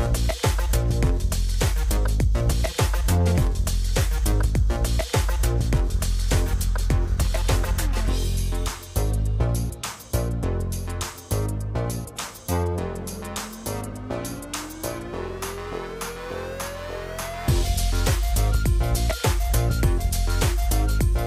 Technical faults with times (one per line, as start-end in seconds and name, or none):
none